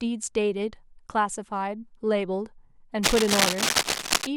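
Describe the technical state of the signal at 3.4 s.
Cable scratch noise covers this moment, running from 3.03 to 4.27 s. Dense, ragged bursts of scratching and rustling sit over the speech at about the same loudness. The likely cause is a worn cable or connector being moved, its contact resistance jumping rapidly.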